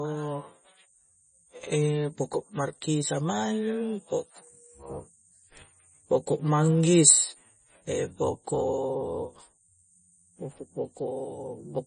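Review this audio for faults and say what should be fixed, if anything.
MP3 compression damage runs throughout the speech, most likely from an MP3 encode at a very low bitrate, which fits a rate around 24 kbps. With so few bits, the encoder chops off the treble, leaving nothing above 9.3 kHz, and discards weak frequency lines that then flicker in and out between frames. The result is a heavy watery, swirling texture, with dulled sibilants and smeared consonant attacks. To prevent it, keep an uncompressed or high-bitrate master and encode to MP3 only at a generous bitrate.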